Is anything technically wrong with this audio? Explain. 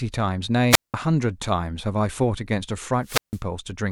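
Yes. Wireless microphone squelch dropouts occur at 0.70 to 0.94 s and 3.03 to 3.41 s: the FM radio link fades, the receiver's squelch mutes output, leaving near-silent holes of about 0.19 s and 0.16 s amid hiss in the speech.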